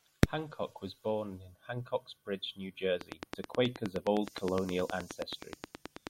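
A speech clip with a train of clicks from 3.01 s to 6.08 s: regular, near-identical ticks at about 9.5 per second, around thirty in all, poking roughly 15 dB above the speech. Likely interference from nearby equipment or a faulty connection or power supply.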